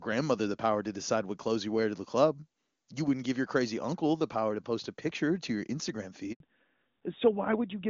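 At 6.32 s the call is handed between networks and no speech frames arrive for about 80 ms, so this handover gap cuts the speech off abruptly until 6.40 s, when the new link begins carrying audio again. Whatever was said in that interval is missing.

From 6.40 s to the end, the call falls back to narrowband: the connection abandons HD Voice for an older narrowband codec, likely AMR-NB at 12.2 kbit/s. Everything above 4 kHz is gone, so speech that was clear and wide before the switch turns duller and boxier.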